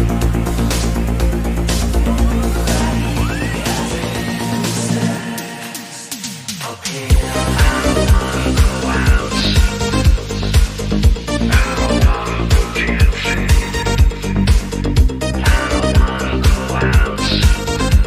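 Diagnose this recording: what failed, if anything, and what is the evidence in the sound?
Nothing in the recording points to a failure at any stage of the chain. No event stands out anywhere in the sound that would mark a problem to diagnose.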